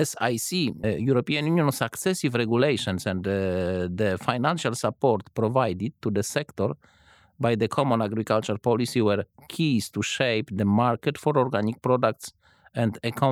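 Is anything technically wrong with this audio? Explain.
No, nothing stood out as technically wrong on listening to this speech recording.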